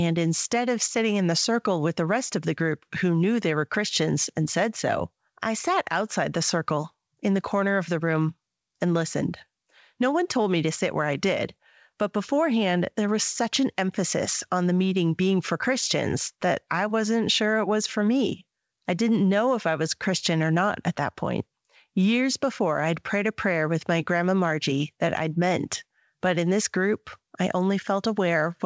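The speech arrives through a call path that is working as intended, its spectrum ending at 8 kHz in the way that fits a wideband G.722 link at 64 kbps, and no fault is present in the signal.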